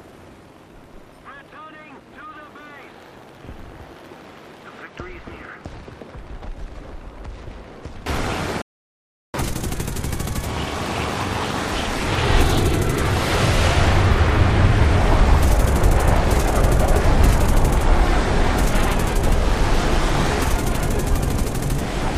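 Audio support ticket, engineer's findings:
Rebuffering stall, 8.62 to 9.34 s. Playback drops to silence for 724 ms, then resumes exactly where it stopped. Player buffer ran dry waiting on the download; no audio lost, 0.72 s added to total duration. Component: streaming client/network delivery.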